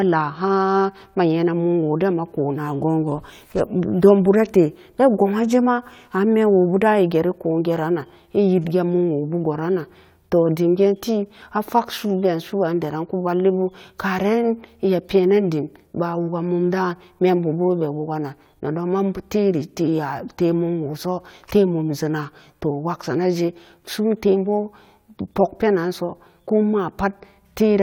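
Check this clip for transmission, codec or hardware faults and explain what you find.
I found no faults in this clip to explain.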